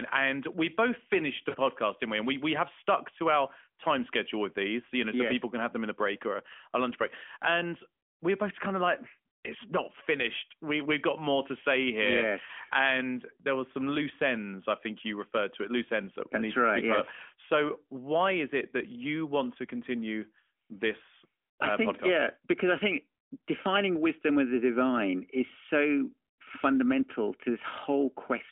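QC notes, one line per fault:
1.50 to 1.58 s, lost AMR speech frames: right after "we both finished the", about 40 ms of speech is missing, which fits two consecutive 20 ms frames failing their check. The decoder fills the gap by repeating the last good pitch and vocal tract settings at falling gain, so the sound smears and sags before "didn't we" returns weak for a moment.
12.46 to 12.50 s, lost AMR speech frames: just after "more to say here", a single lost 20 ms frame produces a brief dip or warble as the decoder stretches the previous frame's settings across the gap. Only one frame is missing. The sound stays inside the narrowband line's roughly 200 to 3400 Hz, so the warble is bandlimited, not a broadband glitch.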